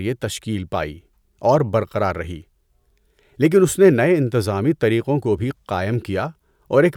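Nothing in the recording stood out as a technical problem on listening.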